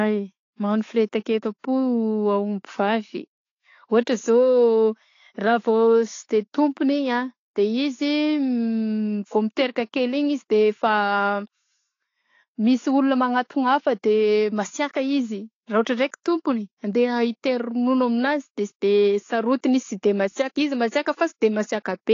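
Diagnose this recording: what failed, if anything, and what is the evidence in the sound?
The trouble sits at the codec stage, and it runs through the whole speech clip. Nothing comes through above about 7.1 kHz, so the top end is gone and sibilants sound dull and smeared, with plainly audible coding damage around them. That points to AAC compression, most likely AAC-LC at a low bitrate around 32 kbps. With that few bits, the encoder drops the cut-off and quantises the remaining bands coarsely against its hearing model.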